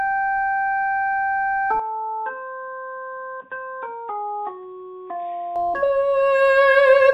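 From 1.80 to 5.56 s the sound turns dull and boxy, nothing above 3.7 kHz, slightly quieter with faint new hiss, likely an input switched to a poorer device.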